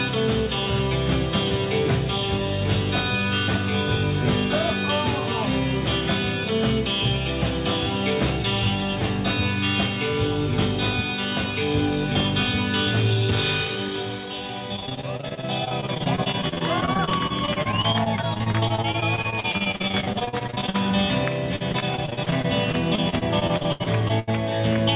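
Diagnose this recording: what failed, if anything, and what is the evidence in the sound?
Network-stage repeated packet loss (robotic sound) from 14.76 to 20.76 s and again from 21.56 to 24.34 s: dozens of holes, up to 42 ms and 79 ms long, patched by extending the previous sound. Unlike silent dropouts, the gaps are filled, giving a choppy texture over the 4 kHz-limited G.711 band.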